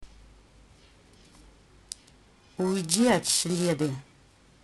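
Periodic clock jitter runs throughout the speech. The converter clock wobbles at around 1 kHz, spraying sidebands that lend a rough, metallic edge, sharpest on higher frequencies.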